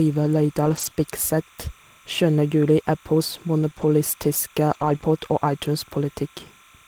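It's a speech clip with timecode bleed all the way through: a quiet chirping warble around 1 and 2 kHz, roughly 30 dB down, whose rhythm fits 29.97 fps code leaking from a neighbouring line. Between 0.65 and 5.03 s there are scattered short gaps, about seven lost packets of 20 ms or less, each patched by extending the last sound, leaving brief ticks and smears.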